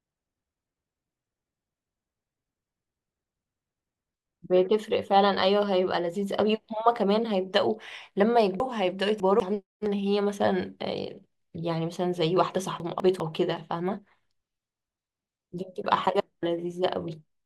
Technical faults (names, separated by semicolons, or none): chunks out of order